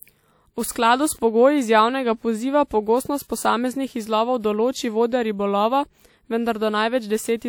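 A short hiss creeps in just ahead of a sharp onset in this speech clip, from 2.67 to 2.71 s, between "pogoji iz javnega poziva" and "pogostost posameznih izlovov določi", softening the attack. This is pre-echo: quantisation noise spread across a transform block smears about 37 ms before the transient.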